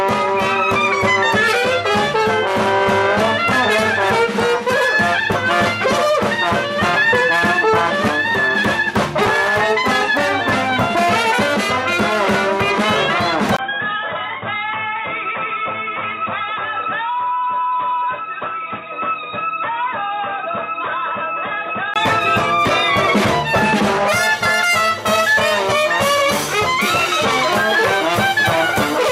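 At 13.57 s there's a 20 ms gap, and from there until 21.96 s the sound goes dull and boxy, with nothing above 3.8 kHz. It also drops roughly 5 dB and picks up a faint new noise floor sitting well below the signal. That combination points to the input switched to a poorer device, likely a narrower-band microphone or a headset's call profile taking over, before the original input comes back and the top end opens up again.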